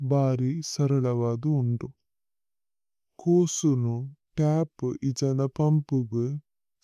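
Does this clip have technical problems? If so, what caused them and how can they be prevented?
Yes. Wrong sample rate runs throughout the speech. Everything plays at about 0.73 times its proper speed and sits about 5.5 semitones low, so the voice sounds slow, heavy and deep. Pitch and tempo have dropped together by the same ratio, which fits audio captured at 44.1 kHz being played back at 32 kHz without any conversion. To prevent this, make sure the playback or import stage reads the file's true rate or resamples it properly.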